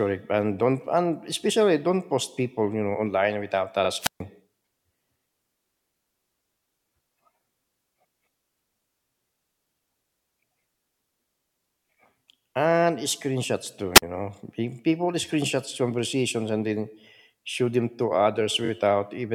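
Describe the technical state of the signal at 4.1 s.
At 4.1 s the speech falls into a wireless microphone squelch dropout, 3.99 to 4.21 s: the radio signal fades, hiss rises, and the receiver's squelch mutes the output for 135 ms.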